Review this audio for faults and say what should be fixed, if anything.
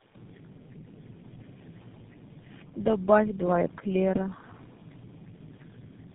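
Tandem speech coding runs through the whole clip. The speech is rough, muffled and warbly, with nothing above 3.8 kHz. The degradation is heavier than any single narrowband codec produces, which fits about three low-rate speech coders in a row, each re-coding the previous one's damaged output. A single codec or a plain band limit would cut the top end but not stack this much roughness and warble. The room noise, about 33 dB below the speech, sits beneath it. To prevent this, route calls so speech is coded only once end to end, using transcoder-free operation or passing the original codec through.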